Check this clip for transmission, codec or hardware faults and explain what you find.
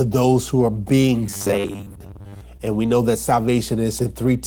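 Four kinds of fault are present in this speech: continuous mains hum, two brief stalls from late packets, a stretch of robotic sound, and one short concealed packet loss.

Mains hum runs through the whole clip as a steady 60 Hz tone, about 15 dB below the speech. A ground loop or nearby transformer is coupling the power line into the signal path, leaving a constant low drone under every sound, including the pauses.

A short stall from a late packet occurs at 1.01 to 1.06 s and again at 3.43 to 3.47 s. Each time the jitter buffer ran dry, and the receiver held the last sound, for 30 ms and then 18 ms, until the packet arrived. Nothing is lost, but the sound briefly freezes with a slight buzz or dip.

Robotic sound from repeated short buffers spans 1.27 to 2.41 s. The speech takes on a rigid, metallic 100 Hz buzz while still loosely tracking its contour. This is likely caused by the software looping the last 10 ms whenever fresh audio came too slowly, replacing roughly half the real signal with repeats.

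Short concealed packet loss hits at 2.57 to 2.61 s. About 20 ms of audio never reached the decoder, and the receiver bridged the gap with 15 ms extrapolated from the preceding sound before blending back. It is heard as a quick smear or wobble in the speech.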